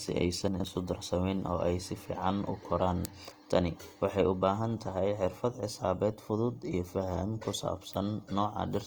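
A speech recording with two problems. Throughout, the sound is grainy and rough, with a noisy, fizzy texture instead of clean harmonics, while the bandwidth stays full and content reaches about 20.2 kHz. This points to Opus compression, likely in its CELT music mode at a rate around 24 kbps. Bands the encoder cannot afford to code exactly are filled by folding lower bands or with noise, so the damage is plainly audible as roughness rather than swirling. Between 0.48 and 0.64 s, just before "isu darsamin oo ay", the chunks are out of order. One 40 ms block plays three blocks later than it should, so the 160 ms stretch comes out briefly jumbled. The sequence breaks at three hard joins, though no audio is lost.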